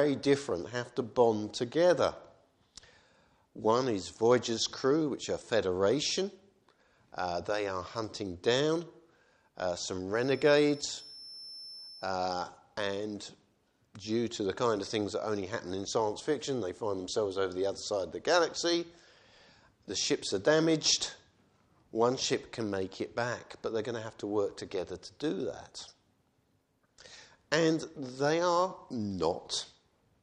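A feedback whistle sits behind the sound from 10.09 s to 12.16 s, a thin, steady tone at 5.3 kHz running for about 2.1 s, roughly 20 dB below the main signal and wavering slightly in level. The likely cause is a loudspeaker-to-microphone loop hovering right at the edge of feedback, so a single high frequency keeps ringing without building into a full howl before it drops away.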